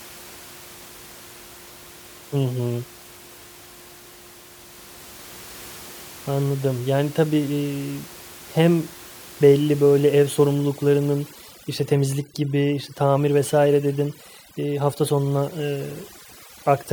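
A noise reduction stage set far too aggressively takes over from 10.54 s, right after "hem belli böyle ev", and runs to the end of the speech clip: this is overdone noise removal. Each band near its noise estimate gets pushed down or switched off, so the room noise, which sat about 22 dB under the speech, drops and breaks up into twinkling specks. Quieter parts of the voice are stripped away with it.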